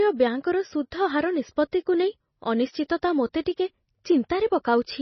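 Throughout the speech, the treble stops dead at 6 kHz and the sound turns watery and swirly, with smeared consonant attacks, likely from heavy MP3 compression at a low bitrate.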